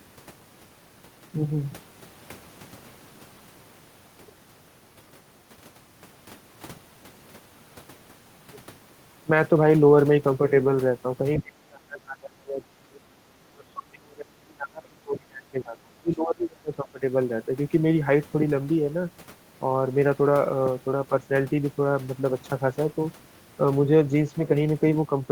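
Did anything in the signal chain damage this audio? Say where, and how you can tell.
Yes. From 11.38 to 13.01 s and again from 13.39 to 17.02 s the speech sinks sharply, at its deepest by about 30 dB. These dips point to the call-processing stage, most likely speech suppressed in double talk. The echo canceller could not tell this talker apart from loudspeaker echo while the far end was also speaking, so it attenuated everything.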